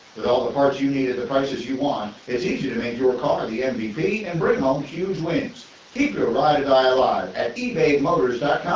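No technical faults are audible.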